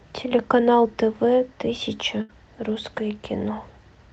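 A speech clip carried over a call path whose coding caps the audio at 8 kHz, which fits Opus at around 32 kbps, with one burst of packet loss from 2.21 to 2.31 s. About 80 ms of audio is missing there. The receiver fills roughly 73 ms by stretching the last sound and fading it down. On a spectrogram this shows as smeared, flattened harmonics or hiss losing energy, and then the speech resumes abruptly with a visible jump in the waveform.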